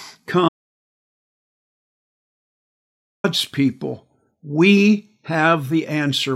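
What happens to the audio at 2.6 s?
At 2.6 s the clip is in the middle of an audio dropout to silence running from 0.49 s to 3.24 s. The input signal was most likely lost upstream, through a disconnected device or a failed link, while the recording chain kept writing silence. The speech cuts off abruptly and about 2.75 s passes in complete silence with no room tone at all, so whatever was said in that stretch is gone.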